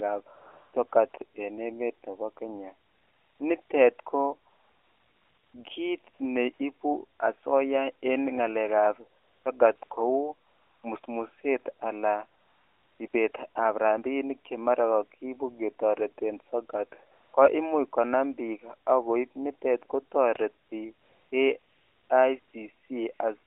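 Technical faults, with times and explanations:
0.36 to 23.20 s, AMR comfort noise: twenty-five gaps from 20 ms to just over 1 s, longest 4.50 to 5.54 s, where the phone judged the talker silent and stopped sending speech frames. The receiver filled each pause with smooth synthetic noise, so the real background switches in and out. The narrowband speech around these gaps stays within about 250 Hz to 3.5 kHz.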